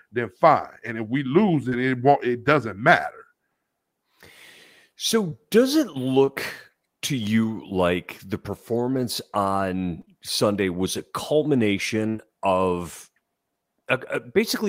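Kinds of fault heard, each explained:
short concealed packet loss: About 20 ms of audio arrived too late or not at all, and the receiver filled each hole by extending the preceding sound before blending back. Brief smears or wobbles result at 1.69, 5.30, 6.25, 10.01, 10.05 and 12.17 s.
burst of packet loss: A consecutive 60 ms run of audio went missing starting at 12.09 s. The receiver stretched the last sound across 54 ms while fading it, so a held, dying continuation replaces that stretch before the audio resumes further on.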